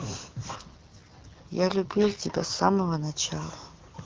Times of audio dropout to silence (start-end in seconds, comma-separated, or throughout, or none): none